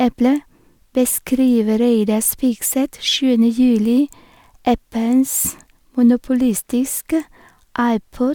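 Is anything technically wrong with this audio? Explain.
No, the speech signal shows no technical faults anywhere in the recording.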